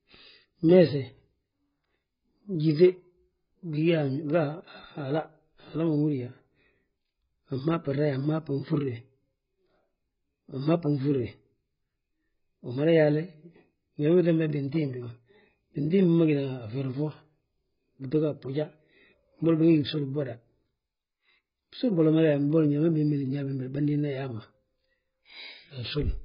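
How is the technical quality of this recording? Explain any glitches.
The technical quality is poor throughout. The speech is dull and smeared, with nothing above 5.1 kHz. This is likely AAC compression: the encoder starves its frequency lines of bits, which fits a very low rate near 12 kbps, and leaves heavy damage. Unlike a clean low-pass filter, it warbles and fizzes on sustained sounds and sibilants.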